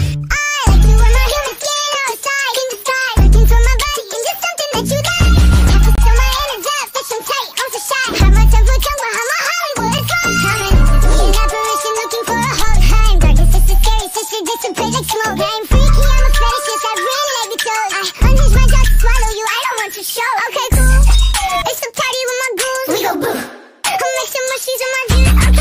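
At 5.95 to 5.98 s the sound stops dead for about 26 ms, and at 9.98 s a shorter hole of about 7.5 ms follows. Both are gaps between stream segments. Two consecutive chunks, which sit about 4 s apart and fit 4-second segments, had timestamps that didn't meet, so the player filled the space with silence. Unlike a dropout, nothing is missing. The sound resumes exactly where it broke off, only slightly later.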